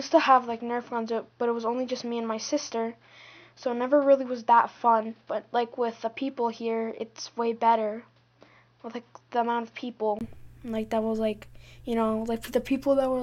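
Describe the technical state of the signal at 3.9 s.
At 3.9 s the sound falls inside a stretch from 0.00 to 10.21 s that behaves like an input switched to a poorer device. Nothing is present above about 6.2 kHz, which gives a dull, boxy tone, and a faint background noise of its own sits well beneath the signal at much the same loudness. The likely cause is the capture changing to a narrower-band microphone or headset profile. Unlike a plain low-pass filter or codec bandwidth drop, it ends with a 20 ms gap at 10.21 s.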